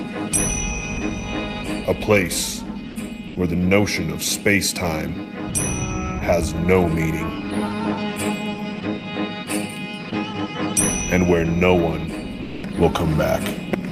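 At 2.91 to 2.95 s, 3.27 to 3.35 s and 12.43 to 12.63 s the sound briefly gives way to flat background noise, then resumes. These gaps are likely sound dropped by the voice detector, which judged the audio to be background and switched to comfort noise.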